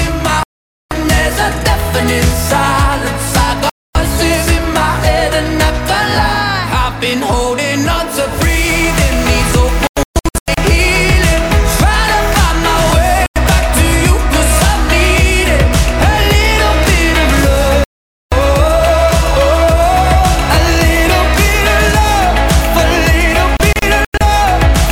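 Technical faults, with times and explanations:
0.43–0.92 s, 3.70–3.96 s, 9.87–10.58 s, 13.26–13.36 s, 17.84–18.32 s, 23.57–24.21 s: digital broadcast dropout. The receiver mutes on corrupt or missing frames, cutting the sound to silence for 96–480 ms. At 9.87 s and 23.57 s the loss breaks into short holes of up to 128 ms and 96 ms. The lost content never returns.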